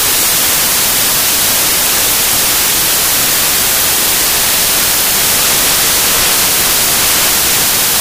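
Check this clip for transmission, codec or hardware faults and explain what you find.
One fault runs through the whole clip: samples built from the wrong bytes. The decoder misassembles each sample's bytes, promoting the fast-changing low bits, so the audio becomes loud, harsh broadband noise, close to white on loud sounds.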